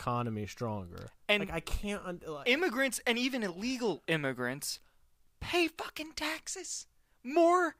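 No audible faults turn up anywhere in the recording; nothing in the speech calls for attention.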